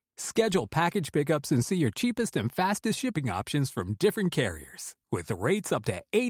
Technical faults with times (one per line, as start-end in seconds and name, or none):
none